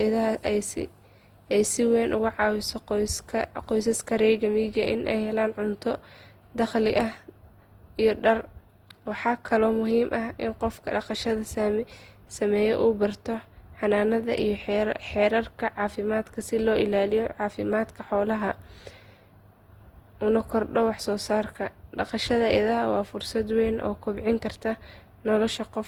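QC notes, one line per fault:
Throughout: generation loss. The speech sounds swirly, smeared and hollow, with blurred attacks, worse than one encode would leave. The likely cause is around seven lossy passes, fitting Opus at 48 kbit/s, each re-quantising on a shifted frame grid.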